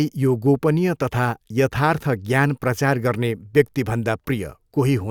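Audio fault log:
No technical faults can be heard in the speech signal; its level, timing and frequency content stay stable and continuous across the whole recording.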